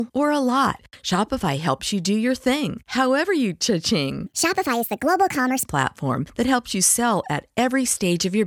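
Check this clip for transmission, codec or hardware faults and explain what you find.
One fault stands out: a wrong sample rate segment between 4.26 and 5.65 s. Here the speech runs 1.5 times too fast and sits about 7 semitones higher, which fits audio recorded at 32 kHz being played out at 48 kHz with no rate conversion. Because samples are consumed faster than they were captured, timing and pitch scale together, so the speech sounds squeaky and rushed. On a spectrogram the harmonics and formant bands jump upward by a factor of 1.5 and syllables are squeezed horizontally. In the waveform, syllable envelopes are visibly shorter for that stretch.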